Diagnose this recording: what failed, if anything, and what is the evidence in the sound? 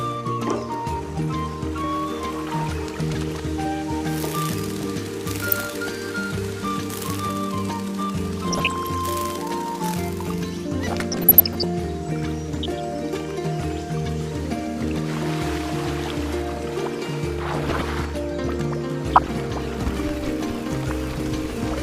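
DAB burbling, at the reception and MP2 decoding stage: short blips of noise at 5.50–5.67, 8.49–8.99, 10.88–11.64, 12.52–12.80, 17.34–17.97 and 19.10–19.33 s. Bit errors of around 0.3 to 0.5 percent slip past error correction and corrupt samples and scale factors, so individual sub-bands jump in level frame by frame.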